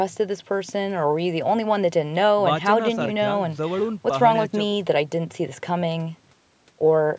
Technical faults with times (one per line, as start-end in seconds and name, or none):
none